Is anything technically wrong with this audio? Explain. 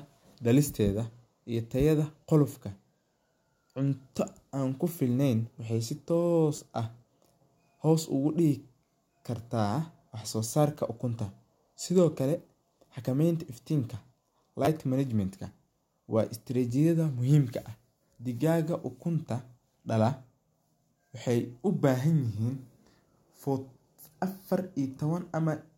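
Yes, a repeated buffer occurs twice, at 6.56 to 6.58 s and again at 14.65 to 14.67 s. Each is a brief buzzy click in the speech. A tiny slice of audio sounds three times in a row with a hard edge at every join, which fits a 10 ms buffer replayed twice more. Fresh audio failed to reach the output device in time, so it reused the last block it had, and roughly 20 ms of the real signal was lost at each spot.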